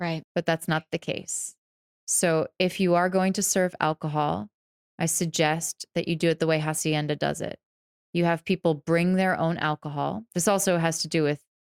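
No technical faults can be heard anywhere in the speech recording.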